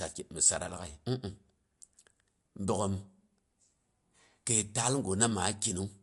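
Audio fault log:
Throughout: MP3 compression; treble cut off at 11.3 kHz, weak frequency lines flickering frame to frame make the speech watery and swirly, likely from encoding around 55 kbps.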